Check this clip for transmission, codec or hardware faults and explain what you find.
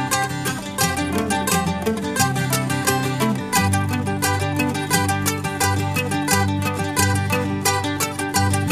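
Listening to the music from beginning to end, nothing stood out as a fault.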